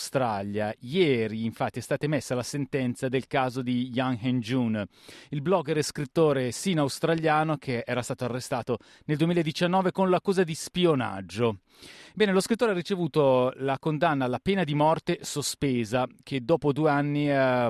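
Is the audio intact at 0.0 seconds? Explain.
Yes, the speech at 0.0 seconds plays through cleanly, with no dropout, click, distortion or other fault at that moment.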